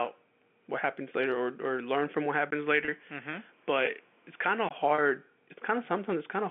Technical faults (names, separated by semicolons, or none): input switched to a poorer device; packet loss with pitch repetition